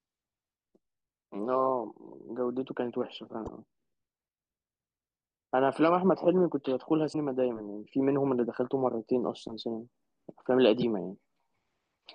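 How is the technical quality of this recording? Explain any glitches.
The speech is marred by three short digital glitches, each a sharp chirp or blip that cuts across the sound for a fraction of a second: at 3.44 to 3.49 s, at 7.09 to 7.15 s, and at 10.78 to 10.84 s, each lasting about 50 to 60 ms. These are damaged data in a compressed stream. A few bytes of the encoded file were lost or corrupted at those points, so the decoder misreads the affected frames, loses its place, and has to hunt for the next valid frame header before clean audio resumes.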